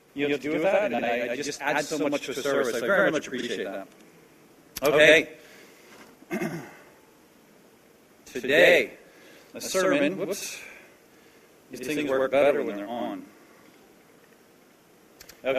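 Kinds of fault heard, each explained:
Channel delay (doubling): One channel runs late by about 85 ms against the other, a gap that fits a 4096-sample buffer, and the two are then summed to mono. At that spacing the late copy stands apart from the direct one rather than blending into comb filtering. The result is a constant slap-back doubling at equal level, present from start to end, which smears every onset into two distinct hits and blurs transients across the whole clip.
Frames out of order: At four points, neighbouring runs of frames were decoded in swapped order, so a short stretch plays with its two halves exchanged and nothing is lost or added. This is heard at 0.93 to 1.04 s and 11.73 to 11.84 s, where the swapped runs are about 48 ms each, and at 3.38 to 3.44 s and 14.16 to 14.21 s, with runs of about 24 ms. Each one sounds like a brief garbled flutter.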